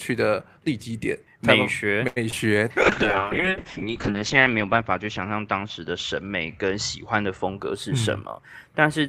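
At 2.07 s a short stall from a late packet holds the sound in place until 2.18 s. The expected packet had not arrived, the jitter buffer ran dry, and the receiver extended the last sound for 88 ms before resuming at the same point. Nothing is lost, but the held segment is audibly too long with a faint buzzy quality, and from here the playout delay is 88 ms greater.

Shortly after, short concealed packet loss occurs twice back to back, at 2.30 to 2.34 s and 2.34 to 2.38 s. Each time about 20 ms of audio failed to reach the decoder, and the receiver synthesised a continuation of the preceding sound to cover it before blending back into real audio. Together they produce a brief smeared, wobbling patch of roughly 40 ms where a quick consonant could be lost.

From 2.82 s to 7.64 s a call bitrate drop degrades the sound. The bandwidth estimate fell, and the encoder went from 48 kbps down to 6 kbps, staying at the lowest rate for about 1.07 s. 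At that rate the coded bandwidth shrinks from 20 kHz to 8 kHz, so the audio turns muffled and coarse, with a watery texture. It clears as the bitrate climbs back.

Overlapping the end of that stretch, a jitter buffer speed-up runs from 7.49 s to 8.64 s. With more audio queued than its target, the receiver trimmed short pitch-period segments repeatedly to reduce latency, removing around 70 ms in total. Playback runs at about 106% speed with unchanged pitch, so this last portion sounds slightly hurried.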